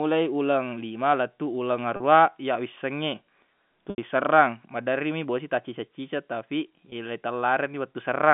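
Brief buzzy, held-over sounds break in at 1.96–2.00 s after "uleng lima lettuq uleng", at 3.90–3.98 s before "serrang maderri mi bosi", and at 6.90–6.92 s. The cause is packet loss with pitch repetition: the receiver looped the last pitch period across gaps of 40, 80 and 20 ms.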